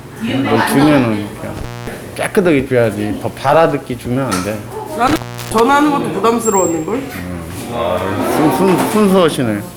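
At 1.57 s and again at 5.07 s, intermittent contact breaks the signal. A loose plug or cable briefly opens. The sound cuts out for about 0.23 s, then 0.36 s, with crackle at each edge and faint hiss during the gaps.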